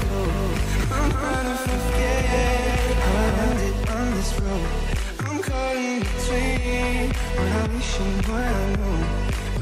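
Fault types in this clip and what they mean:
Doubled audio track: a second full-band copy trails the sound by about a fifth of a second at roughly 5 dB lower, from the start until it cuts off abruptly at 3.56 s, likely a second capture path. Unlike echo or reverb, there is exactly one copy, with no decay or room colouring.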